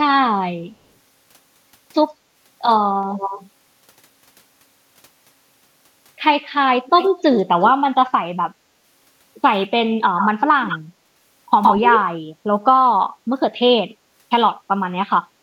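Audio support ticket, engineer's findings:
Echo leak: delayed copy of the speech at 3.1–3.46, 6.85–7.38 and 7.63–7.72 s (about 221 ms behind, well below the direct speech), then at 10.18–10.28, 10.65–10.79 and 11.63–12.1 s (about 116 ms behind, up to roughly speech level). Likely far-end loudspeaker pickup not fully removed by the echo canceller. A discrete repeat with a fixed lag that changes between the two groups, unlike the smooth decaying tail of room reverb.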